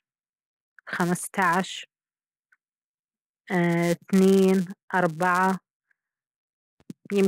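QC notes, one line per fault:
throughout, filter restarted on every block: a steady 172 Hz buzz rides under the speech and rises and falls with its level. The filter's memory is cleared at each block boundary, so every block starts with a small transient, a rate which fits 256-sample blocks.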